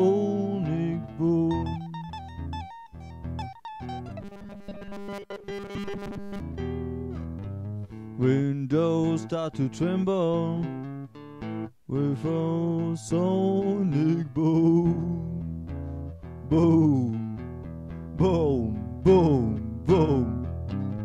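From 4.21 to 6.4 s the sound turns into a rigid, metallic drone, the classic robotic sound from repeated short buffers. There's a fixed 200 Hz buzz, which fits a loop of about 5 ms. The likely cause is audio arriving too rarely, so most of that stretch is filled by repeating the last snippet while the real material gets skipped.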